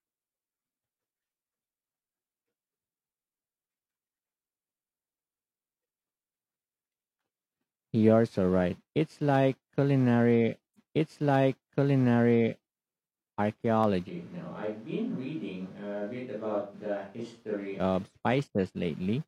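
At 10.73 s the stream segment repeats: the player queued the same chunk twice, so about 2 s of speech plays again until 12.73 s, with a small blip at the jump.

Sharp single clicks at 13.84 s and 14.64 s are likely dropped samples, where a handful of samples go missing and the waveform jumps abruptly.

From 14.10 s to 17.78 s the speech suddenly turns roomy and hollow, about 5 dB quieter, with room noise about 35 dB below it. That's likely a switch to a distant microphone.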